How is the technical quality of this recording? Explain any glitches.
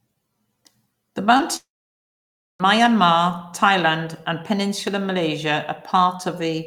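Two kinds of glitches hit the first half, close together.

Around 1.37 to 1.40 s, and again at 1.41 s, there's short concealed packet loss: the receiver covered missing snippets by stretching the last sound, giving a brief smear.

From 1.56 to 2.60 s, a likely long network dropout: roughly a tenth of a second of fading continuation, then about 0.93 s of silence before the audio returns with that stretch missing.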